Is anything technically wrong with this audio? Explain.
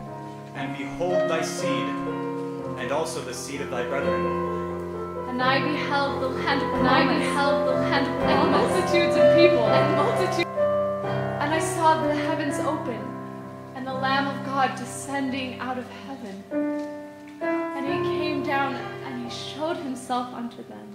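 Yes. From 6.09 s to 10.43 s the audio carries a doubled audio track. A second full-band copy runs roughly one and a half seconds behind the original at about the same level, with no decay or room colour, and it cuts in and out abruptly at those boundaries. That points likely to the signal being captured twice through a slower path. On a waveform or spectrogram the same patterns appear twice, offset by that fixed gap, with hard edges where the copy begins and ends.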